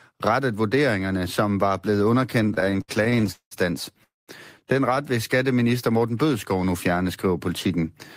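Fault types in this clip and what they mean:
Repeated stalls (stutter), 2.43 to 3.54 s: packets kept arriving late, so playback halted 14 times and the held sound filled 437 ms, the longest gap 195 ms.
Call audio freeze, 4.04 to 4.31 s: the speech halts for 239 ms, fading to silence for 180 ms, then resumes where it stopped; likely a packet delay that drained the buffer.
Jitter buffer speed-up, 7.50 to 7.96 s: surplus buffered audio was trimmed by cutting short pitch-period pieces, around 50 ms in all, so the speech runs 10% faster at unchanged pitch.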